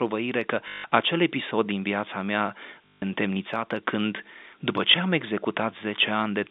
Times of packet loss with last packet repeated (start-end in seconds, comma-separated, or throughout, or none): 0.68-0.84, 2.86-3.02, 4.92-4.94